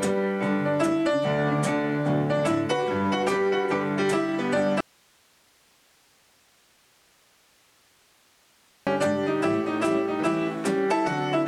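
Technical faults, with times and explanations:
4.81–8.87 s: audio dropout to a faint residue. Sound abruptly drops to low hiss, about 35 dB down, for 4.06 s; likely the signal was lost while the path stayed live.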